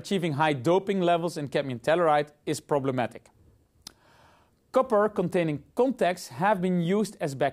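No technical faults occur at any point in this audio, so there is nothing to describe in time order.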